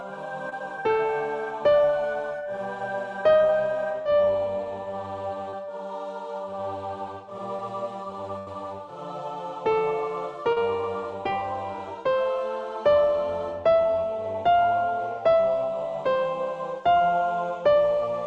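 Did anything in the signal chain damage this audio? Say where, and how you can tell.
Yes, network stage: short concealed packet loss at 0.49–0.53, 4.02–4.15, 5.51–5.54, 7.56–7.60 and 10.52–10.58 s; brief smears where the decoder extrapolated 20–40 ms gaps.

The burst of packet loss at 8.38–8.48 s left 80 ms missing. The receiver continued the last sound and faded it, then resumed with that stretch gone.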